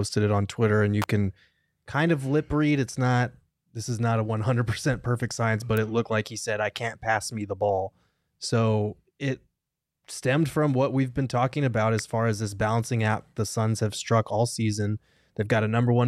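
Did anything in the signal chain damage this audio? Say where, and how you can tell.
Yes: electrical switching spikes on analogue wiring, sharp snaps at 1.02, 5.77 and 11.99 s, likely nearby switch arcs, added over continuing speech, not dropouts.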